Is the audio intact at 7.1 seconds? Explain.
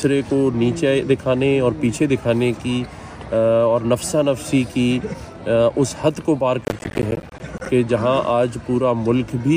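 No. From 6.62 to 7.66 s, processor overload crackle breaks up the audio: the processor keeps missing its deadlines for buffers of roughly 10 ms, leaving dozens of tiny silent holes. Unlike a single dropout, these come as a dense, gritty burst.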